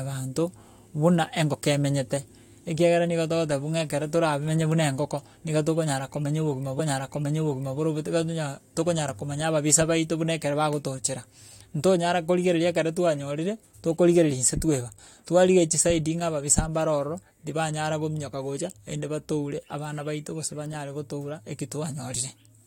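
At 6.78 s, just after "niga tokonyara komenya obogima", a stream segment is repeated: the player queued the same chunk of the speech stream twice, so about 1.0 s of audio plays again, running to 7.78 s, with a small blip at the jump back. What sets it apart from a buffer stutter is length and integrity: a stutter loops a few tens of milliseconds, while here a whole second replays cleanly and adds to the clip's running time.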